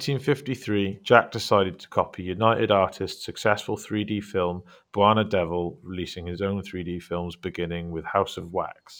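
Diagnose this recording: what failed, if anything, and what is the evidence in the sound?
The failure is imaging from linear upsampling at the sample-rate conversion stage, present for the whole speech clip. The audio was raised from 22 kHz to 48 kHz by straight-line interpolation between samples, which filters poorly. The top of the original band sounds dulled, and a faint mirror of the spectrum sits from 11.03 kHz to 22.05 kHz, roughly 40 dB down, giving sibilants a light metallic shimmer. Codec artefacts would come and go, whereas this image stays fixed and continuous.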